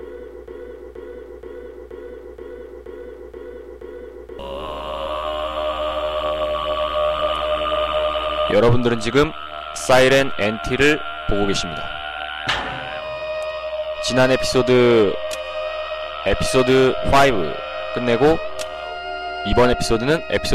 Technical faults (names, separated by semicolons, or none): broken-record loop